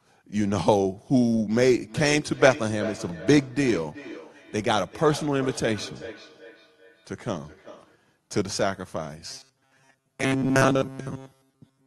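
From 1.85 s to 8.04 s there is feedback echo between two devices. A second device in the room plays the call aloud, and this microphone picks it up again. Each phrase returns roughly every 400 ms, thinner and ringing, peaking about 15 dB below the speech.

From 9.27 s to the end, the speech turns robotic. It becomes a stiff, metallic buzz at 134 Hz that still loosely follows the words. The likely cause is repeated short buffers. A stretch of about 7.5 ms is replayed in place of most of the real audio.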